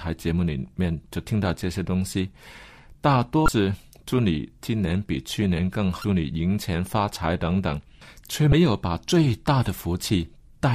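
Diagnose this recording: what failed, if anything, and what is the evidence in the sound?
The fault sits in the codec stage, on the compressed data. The speech carries three short blips, at 3.45–3.49 s, 6.01–6.04 s and 8.49–8.53 s. Each lasts about 30 ms. They sound like a chirp, squawk, click or short hole cutting across the voice. This is damaged data in a compressed stream. Some bytes in those frames were lost or overwritten. The decoder misread them, lost frame sync and then locked onto the next valid header.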